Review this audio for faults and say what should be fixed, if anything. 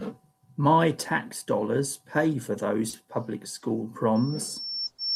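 Two short stalls from a late packet occur, at 2.89–2.95 s and 3.59–3.63 s. In each, the next packet had not arrived on time, the jitter buffer drained, and the receiver held the last speech sound for about 40 ms and 20 ms respectively before resuming from the same point. Nothing is lost, but the sound is briefly drawn out. To prevent this, use a slightly deeper or adaptive jitter buffer and reduce network delay variation.

A loudspeaker feedback squeal starts at 4.15 s and runs to the end of the clip. A single 5.4 kHz tone grows over roughly a second until it sits about 5 dB above the speech. The microphone is picking up its own loudspeaker output, and the loop gain exceeds unity at that frequency, so the tone keeps sustaining itself. To prevent it, lower the monitor gain, separate the microphone from the speaker, or enable acoustic echo and feedback suppression.

A call audio freeze appears at 4.86–5.00 s, inside the squeal. 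About 120 ms of continued sound is inserted without silence, and playback then resumes where it stopped, so nothing is missing. The likely cause is packets held up in transit, leaving the jitter buffer empty while the receiver extended the last sound. To prevent it, stabilise the network path and size the jitter buffer for the delay spikes it sees.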